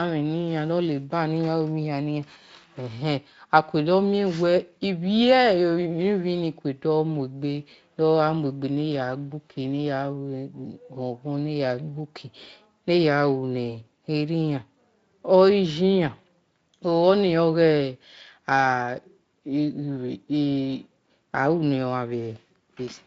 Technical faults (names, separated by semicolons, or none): none